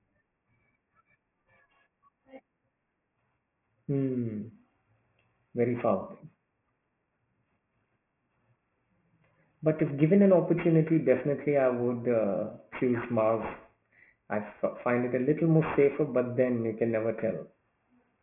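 Aliasing runs throughout: the speech was downsampled without an anti-alias filter, and the hard band edge at 3 kHz points to a 6 kHz rate. Higher content folds back roughly 20 dB below the signal, making sibilants gritty and metallic. A spectrogram shows energy slammed against 3 kHz with mirrored streaks.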